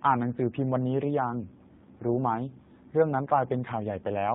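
Throughout, the G.729 codec strips everything above 4 kHz. It rebuilds speech from a few pulses per frame, leaving it plainly rough and synthetic, consistent with 8 kbit/s.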